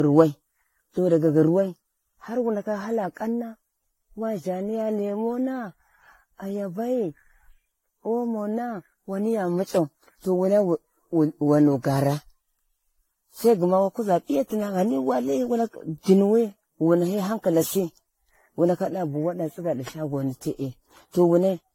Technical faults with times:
0.00-21.74 generation loss

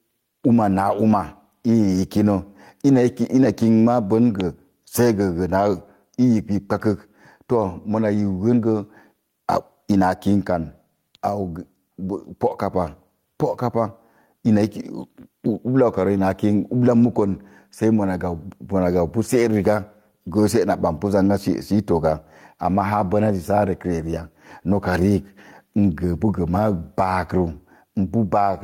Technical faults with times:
0.00-28.63 gain pumping

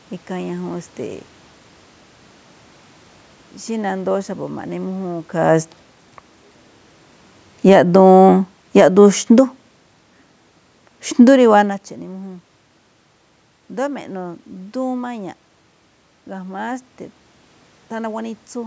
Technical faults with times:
7.53-9.53 automatic gain falling

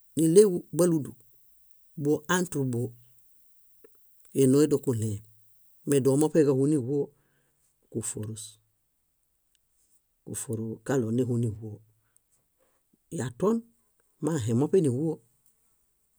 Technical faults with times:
0.00-6.27 pre-emphasis left on

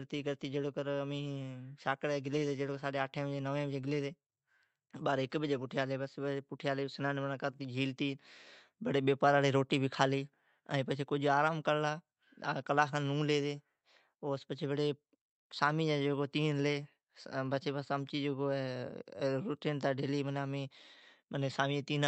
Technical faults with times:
none

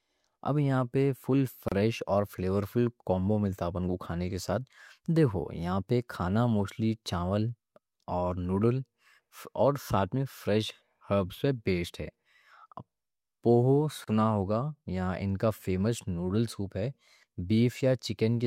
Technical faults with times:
1.68-1.72 gap at a join of encoded pieces
14.04-14.08 gap at a join of encoded pieces

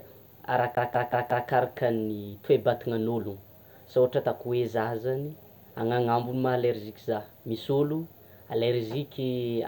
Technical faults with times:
0.75-1.48 CD stuck on one turn

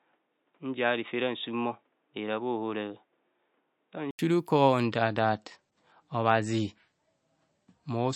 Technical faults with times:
0.00-4.19 input switched to a poorer device
4.84-8.15 adaptive stream at a lower bitrate

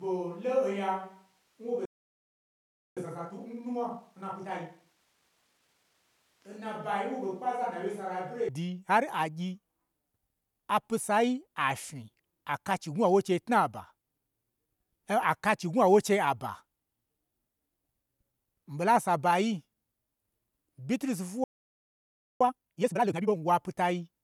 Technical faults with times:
0.00-8.48 switch to a distant microphone
1.85-2.97 playback stall
2.97-5.97 time-compressed catch-up
21.44-22.41 playback stall
22.41-23.37 time-compressed catch-up

